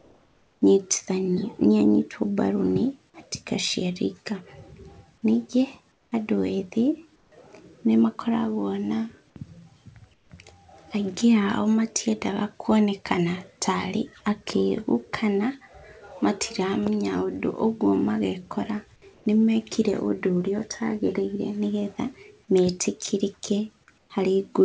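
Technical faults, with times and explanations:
0.0–0.62 s, 5.92–6.12 s, 7.16–7.32 s, 10.14–10.30 s, 19.14–19.26 s and 23.98–24.10 s: comfort noise in place of the background. In these pauses, about 40 dB below the loud parts, the real background becomes steady, featureless hiss. It is up to about 7 dB quieter, except at 19.14 s, where the level holds. The likely cause is the sender going silent between phrases while the receiver synthesises filler noise. Like the rest of the call audio, it has nothing above 8 kHz.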